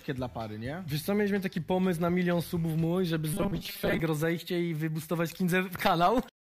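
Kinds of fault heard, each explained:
Robotic sound from repeated short buffers, 3.34 to 4.00 s: the audio turns into a rigid, metallic buzz at 200 Hz that still loosely tracks the underlying sound. The likely cause is new audio arriving too seldom, so playback fills the gaps by looping the last fragment instead of moving forward. A 200 Hz buzz fits a repeated slice about 5 ms long, and most of this stretch is repetition rather than fresh audio.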